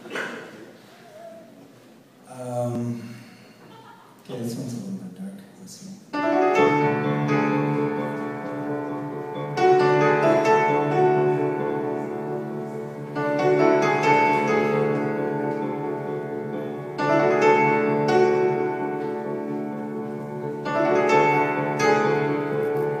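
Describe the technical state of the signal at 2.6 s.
At 2.6 s the signal is intact, with no audible technical fault at that moment.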